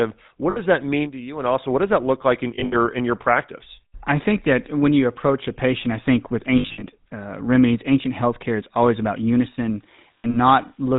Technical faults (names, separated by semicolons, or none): GSM full-rate codec; lost GSM frames; low bit depth with dither